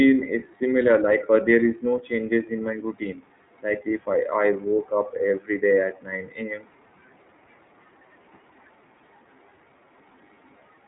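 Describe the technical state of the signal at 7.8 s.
At 7.8 s the speech is passing through the iLBC codec, as it does for the whole clip. Each frame's excitation is coded on its own, which fits 30 ms frames at 13.33 kbps, leaving nothing above 3.8 kHz and a plainly audible rough, synthetic edge.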